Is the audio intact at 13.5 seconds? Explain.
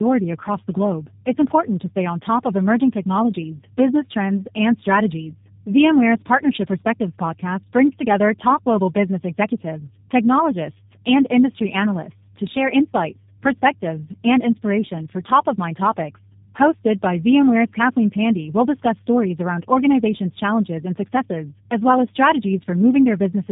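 No. At 13.5 s, as across the whole clip, a steady 50 Hz mains hum sits about 30 dB below the speech. It comes from power-line coupling and holds a fixed pitch, unlike rumble or wind, which drift. The speech also shows tandem speech coding: it sounds rough, muffled and warbly, with nothing above 3.8 kHz. That points to two passes through a low-rate codec such as G.729A, each re-coding the last one's damage. A single band-limited pass would sound duller but not this warbly.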